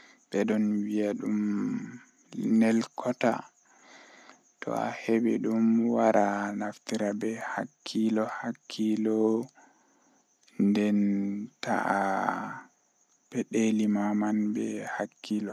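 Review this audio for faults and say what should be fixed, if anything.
No faults are audible here; nothing needs fixing.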